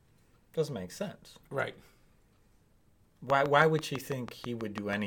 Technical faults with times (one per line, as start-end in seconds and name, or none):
3.30-4.94 train of clicks